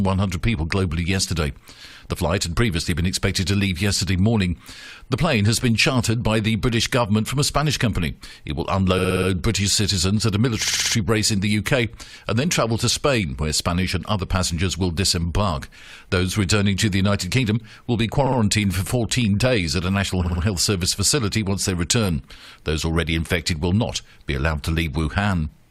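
Repeated frames occur four times: 8.98 to 9.28 s, 10.64 to 10.94 s, 18.26 to 18.38 s and 20.23 to 20.41 s. Each time, the same 60 ms block of compressed data reaches the decoder again and again, five, five, two and three extra times, so the sound stutters in place. Each stutter lengthens the clip by 300, 300, 120 and 180 ms respectively.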